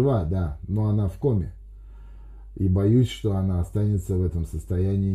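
Nothing is technically wrong with this audio, so there are no times or causes to give.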